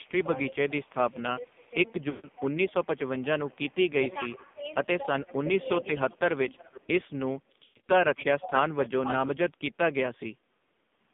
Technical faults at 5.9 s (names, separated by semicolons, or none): AMR narrowband mobile codec; speech suppressed in double talk; echo leak